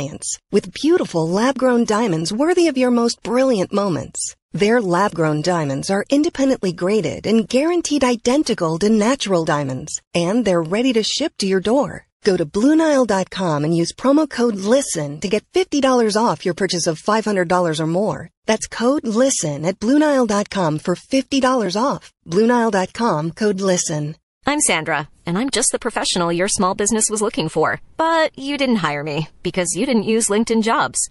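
Right from the start the speech sounds watery and swirly, likely MP3 compression at a low bitrate, something around 48 kbps. Pre-echo shows up at 0.72, 1.86 (after "with beautiful lab grown"), 3.22, 8.43, 11.62 and 12.21 s: a hiss about 13 to 21 dB louder smears 24 to 37 ms ahead of each attack, which points to long blocks without short-block switching.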